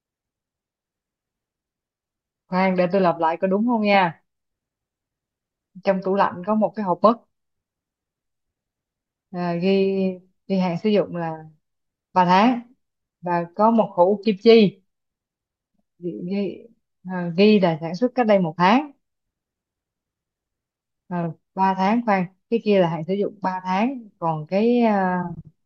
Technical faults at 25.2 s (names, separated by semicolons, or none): none